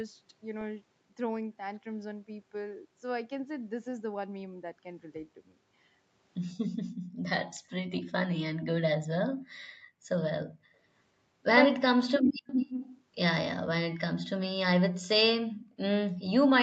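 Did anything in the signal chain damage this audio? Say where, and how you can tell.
Yes, three problems, all from the echo-cancellation stage of the call processing. The band limit at 8 kHz comes from the call's codec and microphone filtering, not from damage.

Background gated by the echo canceller: from 7.1 to 7.23 s the room sound behind the talker falls away by about 38 dB for roughly 150 ms, then returns. The canceller clamped the microphone while the far-end loudspeaker was active. It is the ambience that vanishes, not the speech itself, which sets it apart from a network dropout, where everything goes silent and often comes back with a glitch.

Speech suppressed in double talk: from 11.68 to 12.45 s the talker's own speech dips hard, down by around 40 dB over roughly 0.7 s. This is likely the canceller misreading both sides speaking at once as echo and attenuating the near end. 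Packet loss would sound different: short robotic or smeared gaps, not a level being pushed down and let back up.

Echo leak: from 12.47 to 13.01 s a second copy of the speech trails the original by 170 ms, sitting roughly 10 dB below it. The likely cause is a loudspeaker on one end whose canceller failed to remove everything its microphone picked up, so the residue was sent back. A fixed 170 ms offset points to acoustic echo rather than room reverberation, which would smear continuously rather than repeat at a fixed delay.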